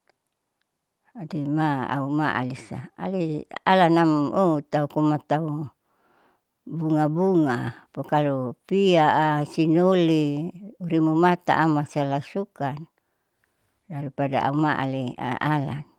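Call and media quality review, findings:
Clock drift between sender and receiver, whole clip. Sender clock running roughly 5% fast against receiver. Jitter buffer keeps overfilling. Receiver must discard audio to hold latency. Probable component: sender capture clock versus receiver playout clock.

Repeated timing corrections, 0.17 s to 15.99 s. Short pieces of speech cut out, all in one direction, unevenly spaced. Net pace near 105%. Probable component: receiver jitter buffer compensating for the fast sender.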